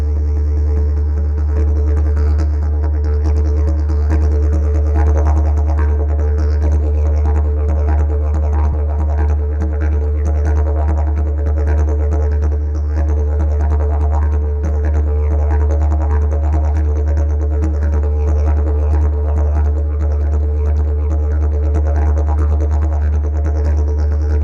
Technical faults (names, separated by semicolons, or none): corrupt frame decoded